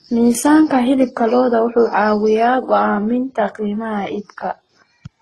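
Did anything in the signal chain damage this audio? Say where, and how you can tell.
Yes, at the codec stage. Throughout the speech, a smeared low-bitrate texture sits under a second, grainier coding noise, with nothing above 12.2 kHz. This is likely transcoding between lossy codecs, and it fits a very low-bitrate HE-AAC pass re-encoded through Opus and then AAC-LC.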